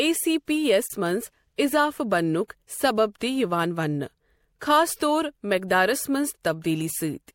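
A speech recording with a gap at a join of encoded pieces from 0.87 to 0.90 s, a silence of about 28 ms where separately encoded sections were joined without trimming the encoder's start delay and end padding. On a waveform it appears as a flat dropout with smeared edges; a spectrogram shows a vertical blank band before the sound resumes where it stopped.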